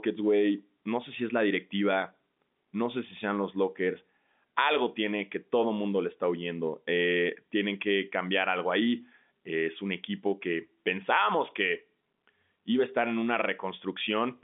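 Speech with no technical fault to report. It has the narrow sound of G.711 telephone coding, with the band running from about 200 Hz to 3.6 kHz and nothing heard above about 3.7 kHz.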